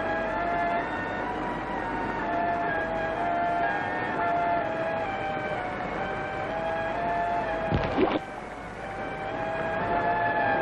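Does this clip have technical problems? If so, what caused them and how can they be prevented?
Yes, there are clock slip clicks from 0.11 s to 10.59 s: a soft rattle of ticks about every 40 ms. That steady rate fits single-sample slips from two unsynced clocks, likely drifting around 700 ppm apart. To prevent it, lock both devices to one word clock or use proper sample-rate conversion.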